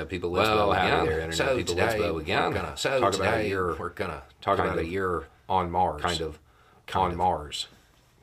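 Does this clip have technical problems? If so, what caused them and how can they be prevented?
Yes. A doubled audio track runs throughout: a second full-band copy of the speech trails about one and a half seconds behind, at roughly the same level, with no decay. This is likely a second capture path or misaligned duplicate edit. Route a single source and check for duplicate tracks before export.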